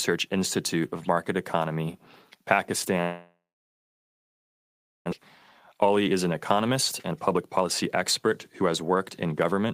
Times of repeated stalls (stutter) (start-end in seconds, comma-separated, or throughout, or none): none